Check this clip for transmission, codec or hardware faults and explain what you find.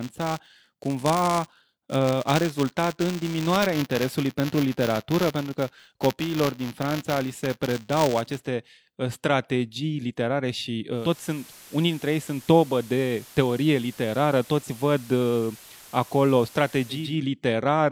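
Two faults are audible in this speech clip.

From the start to 8.38 s there is a steady robotic buzz at 200 Hz riding on the speech. This is buffer tearing: writer and reader cross every 5 ms period, so a small slice of each buffer replays audio from roughly 15 ms earlier, with hard joins either side.

From 10.90 s, just after "ă strategii literare și", until 17.17 s, hiss rises to roughly 25 dB below the speech. This is digital radio blending to analogue: the receiver lost its digital stream and cross-faded over 285 ms to the FM broadcast, with no level change, then returned.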